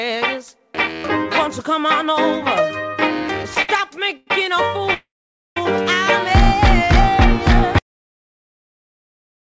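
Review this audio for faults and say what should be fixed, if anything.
Two short stalls from late packets, at 3.62 to 3.70 s and 4.17 to 4.28 s: the jitter buffer ran dry, so the last sound gets held about 66 ms and then 99 ms before resuming.

At 4.94 to 5.57 s there's a call audio freeze, likely from packets held up in transit. The held sound fades to silence for about half a second, then picks up where it left off.

The audio has a cut-off end at 7.79 s. It drops straight to digital silence mid-sound, with no decay, because the final buffers never got written. Through all of this the G.722 path shows nothing above 8 kHz.

To prevent it, give the jitter buffer more headroom for network delay spikes, and make sure the recorder flushes its last buffers before closing the file.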